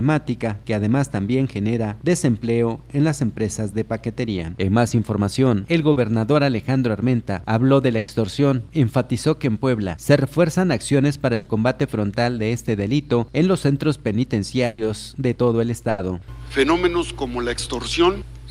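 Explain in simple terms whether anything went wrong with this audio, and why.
Two kinds of network fault interrupt this audio.

The first is short concealed packet loss, at 4.89 s and 5.92 s. A tiny slice of sound arrived too late to play. It was 20 ms the first time and 40 ms the second. The receiver patched each hole by stretching the sound just before it, then blended back in. The patches are brief, so they come across as a quick smear or wobble. The first one also nudges the timing slightly later, by a few milliseconds.

The second is a burst of packet loss, which happens four times. The gaps are at 7.98 s (100 ms), 11.34 s (120 ms), 14.66 s (120 ms) and 15.90 s (80 ms). Each time, several pieces of sound went missing in a row. The receiver filled the gap by holding and fading the last sound, so you hear a held buzz or a fading hiss. Then the audio jumps ahead, and the part in between is simply gone.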